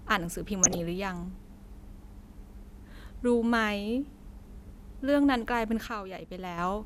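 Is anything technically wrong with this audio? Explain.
Yes, there are two problems in this speech clip.

From 0.63 to 0.80 s there's a patch of DAB burbling, short blips of noise riding over the speech. Weak reception let bit errors slip past the error correction into the MP2 data, at a rate somewhere under one percent, so corrupted samples put blips of noise in single sub-bands and corrupted scale factors made sub-bands leap in level for up to a frame. The length fits roughly seven damaged frames in a row.

Then from 5.87 to 6.58 s there's a sudden gain jump: the level drops by about 6 dB all at once, speech and background noise together, and comes back up at the end. The likely cause is a digital gain setting or bit shift applied straight to the samples with no ramp, so the change lands between one sample and the next instead of easing in.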